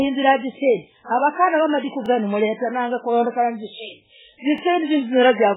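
Throughout the clip the speech sounds watery and swirly, with nothing above 3.8 kHz, which points to heavy MP3 compression at a very low bitrate, likely around 8 kbps. The encoder has run out of bits, so it cuts the treble and lets weak frequency lines flicker between frames.

At 2.06 to 2.08 s, just after "avenazisendii wavakanah wamadiku", and again at 4.58 to 4.61 s, a brief stutter marks overlapping chunks. The audio was handled in pieces about 2.5 s long, and each started before the previous one ended, so about 23 ms is heard twice at each join.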